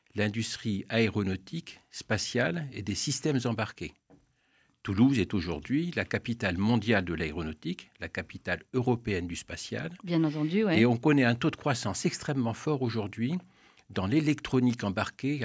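No technical fault can be heard: the audio carries the ordinary signature of call microphone processing, with the lowest bass trimmed by its high-pass filter and nothing above 8 kHz, both of which are normal for that path.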